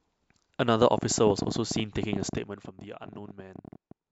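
From 0.83 s to 3.92 s, a train of clicks ticks over the speech at an irregular 13.9 per second, around forty in all, peaking roughly 15 dB above the signal, likely from equipment interference. Between 2.2 s and 2.76 s, zipper noise appears as the level drops about 15 dB in unsmoothed 1 dB steps, around thirty per second, each step adding a small click.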